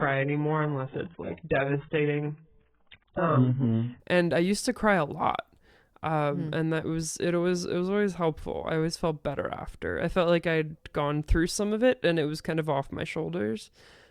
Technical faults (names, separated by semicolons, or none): adaptive stream starting at a low bitrate